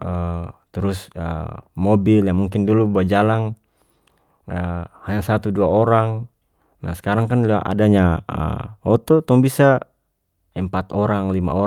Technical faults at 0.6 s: none

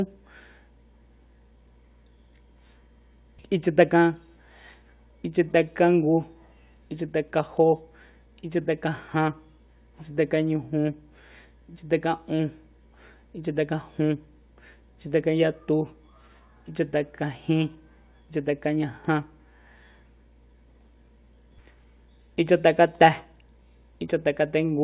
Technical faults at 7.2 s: none

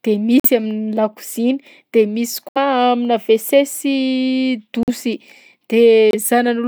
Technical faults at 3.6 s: none

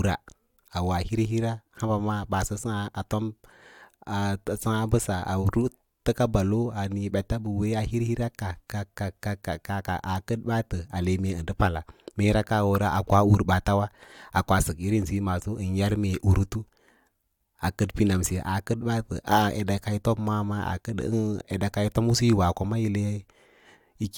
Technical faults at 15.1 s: none

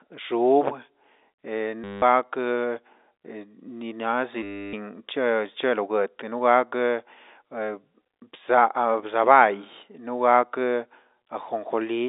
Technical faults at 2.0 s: packet loss with last packet repeated

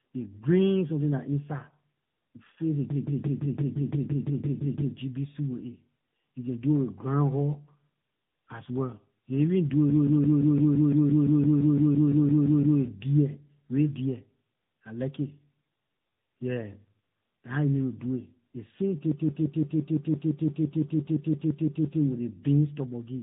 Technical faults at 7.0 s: tandem speech coding

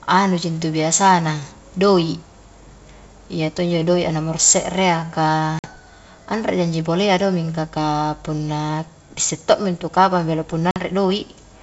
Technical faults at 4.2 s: none

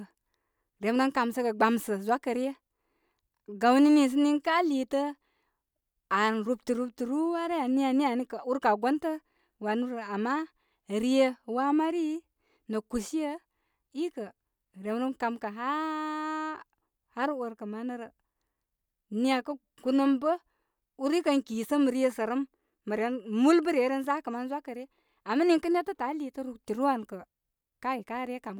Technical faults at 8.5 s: none

